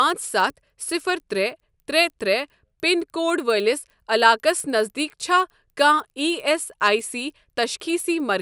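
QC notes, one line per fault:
throughout: resampler restarted on every block. Each 100 ms block is converted alone, so edge errors tick at 10 Hz under speech, which fits 24 kHz to 48 kHz upsampling.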